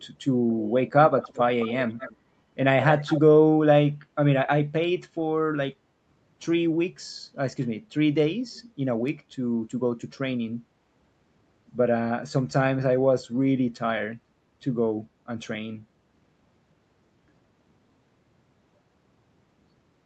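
Speech, with an echo leak in the first few seconds. A faint delayed copy of the voice trails the speech by about 216 ms, at 0.51 to 0.68 s, 1.18 to 1.4 s, 1.59 to 2.16 s and 2.88 to 3.21 s. It sits well below the direct speech, a little louder in the second and fourth stretches. The likely cause is a far end on a loudspeaker whose echo canceller let part of its microphone pickup return down the call.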